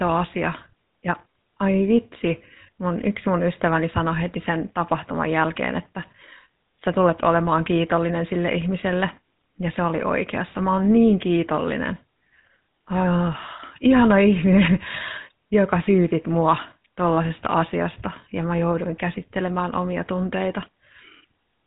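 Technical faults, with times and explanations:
Throughout, GSM full-rate codec: the speech was squeezed into roughly 13 kbps by a vocal-tract model excited with sparse regular pulses, so nothing above 4 kHz survives and the coarse excitation leaves a plainly audible buzzy, gravelly roughness on the voice.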